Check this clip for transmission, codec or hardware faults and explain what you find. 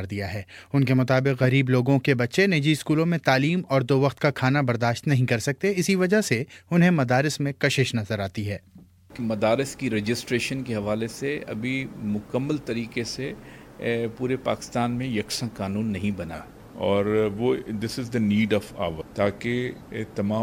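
One fault, a wrong sample rate, affects the last stretch of the clip from 16.34 s to the end at 20.43 s. The samples are played slower than they were captured, with no rate conversion, so pitch and speed drop together. The sound runs at 0.919 times normal speed and about 1.5 semitones flat. That ratio fits 48 kHz material played at 44.1 kHz. On a spectrogram, every component shifts down by roughly 8% and events stretch in time. On the waveform, transients sit correspondingly further apart.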